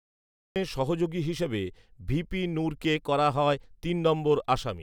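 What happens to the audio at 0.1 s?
At 0.1 s there is only digital silence. This is a cut-off start running to 0.56 s, where the recording began late and the speech enters abruptly mid-sound, just before "সহযোগী হিসেবে ভিপি নূরকে". Unlike a fade-in, it has no natural attack or gradual rise.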